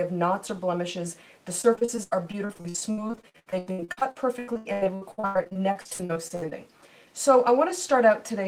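From 1.61 s to 6.53 s, the audio shows repeated packet loss, giving a robotic sound. Around fifty short dropouts arrive one after another. The longest lasts about 96 ms. Each hole is bridged by stretching out the last good sound, so the audio turns choppy. About two fifths of this stretch is patched this way. The patches cover roughly 1.9 s in total, and pieces of the sound are simply missing.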